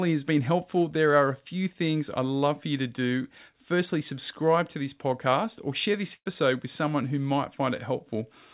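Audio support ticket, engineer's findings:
Burst of packet loss, 6.14–6.28 s, after "podcast or share this": jitter buffer concealment holds and fades the last sound, then brief silence, about 120 ms skipped. Spectrogram shows a frozen smeared band, then a blank gap.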